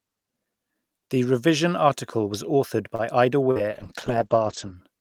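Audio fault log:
2.95–3.02 s, short stall from a late packet: a packet showed up late and the jitter buffer ran dry, so the last bit of speech gets stretched for about 35 ms. Nothing's actually lost, but playback picks up from the same spot, now running 35 ms later, and you hear a slightly held, buzzy moment.
3.51–3.58 s, short concealed packet loss: about 40 ms of audio never made it to the decoder, so the receiver patched the gap with roughly 45 ms of extrapolated sound, continuing the pitch or shaped noise, then blended back in. It comes across as a quick smear or wobble.
3.68–4.81 s, call bitrate drop: the bandwidth estimate fell and Opus was told to go from 48 kbps down to 9 kbps, sitting at the bottom for about a second. Coding gets coarse and the top end is cut from 20 kHz to 8 kHz, so speech turns muffled and a bit watery.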